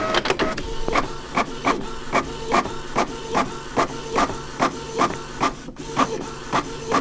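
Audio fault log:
0.88–0.91 s, 3.78–3.80 s and 5.00–5.16 s: loud pop. Each is a sharp, brief pulse peaking about 15 dB above the surrounding sound, which carries on underneath. The last event holds two pops in quick succession. The likely cause is a sudden voltage step, such as a plug, switch, static discharge or driver glitch, entering the signal. Later circuits shape it into a thump, heard within a band that ends near 8 kHz.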